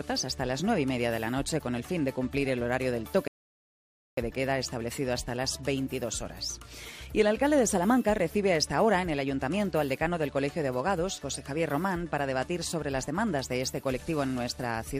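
At 3.28 s the audio drops into silence, and it stays silent until 4.17 s. This is a rebuffering stall. The player used up its downloaded audio and had to wait for more data to arrive. When playback picks up again, it continues from the exact point where it stopped. Nothing is skipped or repeated. The gap simply adds about 0.9 s of dead air to the timeline, and that pause is what you hear as the break.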